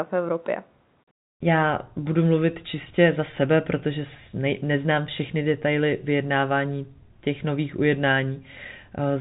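Nothing goes wrong anywhere in this speech, which simply carries the usual band limit of G.711 telephone coding, with nothing above about 3.8 kHz getting through.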